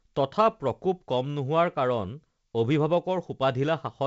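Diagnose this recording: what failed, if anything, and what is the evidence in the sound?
Nothing has failed in this speech recording: the audio stops at 7.7 kHz and carries the faint upper-band hiss and slightly noisier lower band of G.722 wideband telephone coding, which fits that codec running at 56 kbit/s and working as designed.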